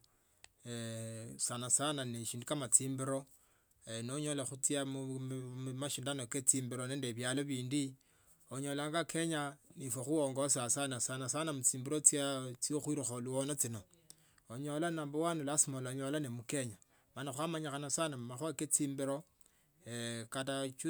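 There are no technical faults to describe at any point in this speech recording.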